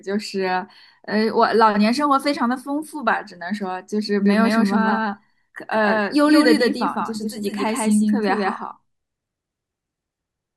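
From 4.26 s to the end, the speech is a doubled audio track. An equal copy lags about 150 ms, likely from a slower path.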